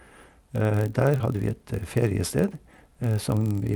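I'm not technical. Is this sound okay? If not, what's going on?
No. A steady low buzz runs through the whole clip, at about 43 Hz. This is a block size mismatch (padded). One stage hands over blocks that are too short, and each is topped up with silence. That fits a 1024-sample read block. From 1.18 to 1.22 s there is a short concealed packet loss. About 20 ms of audio never arrived in time, and the receiver filled the gap with a brief smear.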